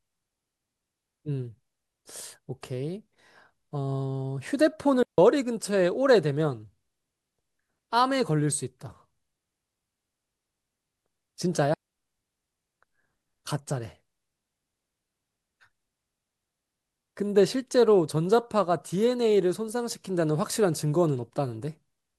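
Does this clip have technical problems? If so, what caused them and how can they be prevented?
Yes. Digital wireless dropouts at 5.03 to 5.18 s (about 155 ms) and 11.74 to 11.98 s (about 246 ms): the receiver lost too much data and muted with a very short fade, leaving clean near-silent holes. Unlike analogue RF dropouts, there is no hiss or static burst around them. Keep clear line of sight, shorten transmitter-to-receiver distance, and avoid crowded frequencies.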